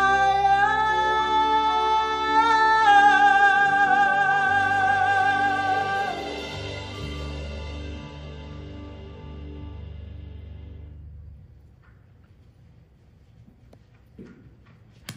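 Nothing stood out on listening.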